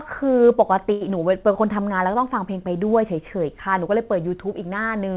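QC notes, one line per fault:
0.92–1.03 s, short stall from a late packet: the speech is briefly held and drawn out for 88 ms with a faint buzzy sameness, then resumes where it paused. A packet arrived late and the jitter buffer ran dry, so the last sound was stretched. Nothing is lost, but playback falls 88 ms behind.
1.09–1.11 s, short concealed packet loss: a quick smear or wobble as about 40 ms of speech drops out, with only about 6 ms patched over. That audio missed the decoder, so the receiver briefly continued the last sound, then skipped ahead, reducing the delay by roughly 30 ms.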